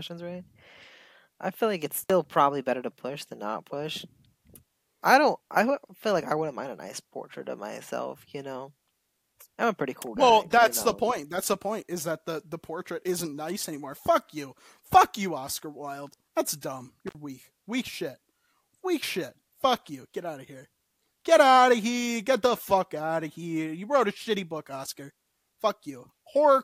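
A loose cable or plug in the signal path briefly loses contact twice, an intermittent contact fault, at 2.03 s and again at 17.07 s. Each time the connection stays open for about 57 ms, so the speech drops out abruptly, with a short crackle as the contact breaks and again as it remakes. During each gap faint hiss remains before the voice returns.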